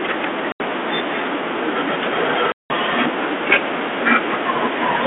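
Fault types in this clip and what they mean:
Packet loss on an ADPCM call: packets of the 32 kbit/s G.726 stream went missing and were filled with silence, so the decoder's adaptive predictor and step size drifted away from the sender's. The telephone-band speech drops out abruptly for 80 ms at 0.52 s and for 180 ms at 2.52 s, each a hard-edged hole. The speech then returns slightly distorted, settling within some tens of milliseconds.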